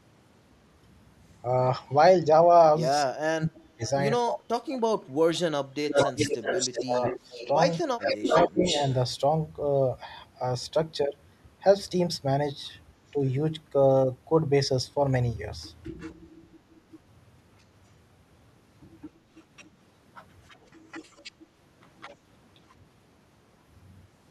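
From 3.05 to 7.41 s the speech dips and breaks up, for about 3 s in total, falling by roughly 40 dB at its deepest. This is speech suppressed in double talk. Both sides were likely talking at once, and the echo canceller turned this talker down along with the echo. Inside that stretch, at 3.86 s, a faint echo leak slips through, very quiet and about 0.25 s late. From 5.89 to 8.96 s a much stronger echo leak follows, nearly as loud as the speech and 365 ms behind it. The canceller likely missed loudspeaker sound picked up by the far microphone. From 8.3 to 8.63 s the speech dips again, by roughly 15 dB, another brief double-talk suppression. Later, quieter echo leaks return at 16.0 to 16.14 s, with a 365 ms delay, and at 19.02 to 19.65 s, 20.48 to 21.32 s and 22.0 to 22.73 s, each delayed 212 ms and well below the speech. Each is likely leftover loudspeaker pickup sent back down the line.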